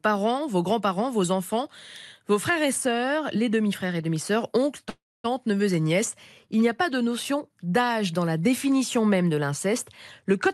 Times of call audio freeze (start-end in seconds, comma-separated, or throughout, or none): 4.89-5.35